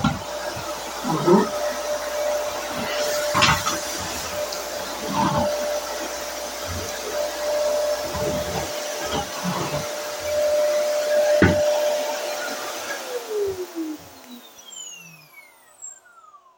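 The recording is of everyday sounds, and a mains hum runs under it from the start to 8.19 s. It is a steady low tone at 60 Hz, sitting well below the sound, roughly 30 dB down. The power line has leaked into the signal, through a ground loop or coupling from a nearby transformer. The hum then stops at 8.19 s.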